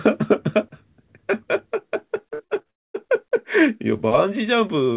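From 2.34 to 2.69 s there's repeated packet loss, that choppy, robotic sound. A handful of short holes, the longest around 52 ms, get patched by stretching the last bit of audio. About 39% of that stretch is filler, so the speech turns choppy and gappy.

Right after, from 2.70 to 2.96 s, comes what's likely a long network dropout. Roughly a quarter second of audio never shows up. The receiver smears the last sound into a quick fading buzz, then it's near silence until the speech picks up again, with that chunk simply gone.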